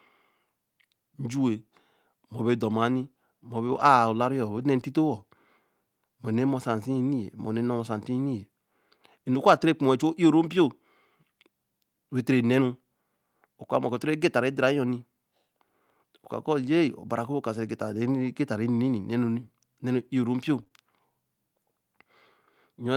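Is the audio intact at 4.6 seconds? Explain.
No. Two lost packets were rebuilt from error correction between 4.57 and 4.63 s. The following packets' low-bitrate copies filled about 40 ms, so there is no gap, just briefly rougher, noisier speech.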